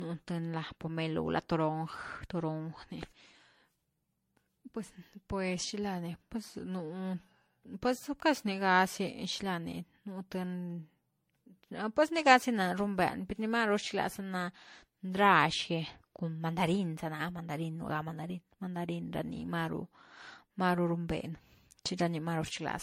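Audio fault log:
throughout: generation loss. The speech sounds swirly, hollow and smeared, with consonant attacks blurred and nothing above 16.5 kHz. The likely cause is lossy encoding repeated about ten times, which fits a chain of MP3 passes near 64 kbit/s. Each pass requantises on a shifted frame grid, so noise and spectral holes pile up. That accumulation is what separates it from a single encode at that bitrate, which would sound cleaner and less washy.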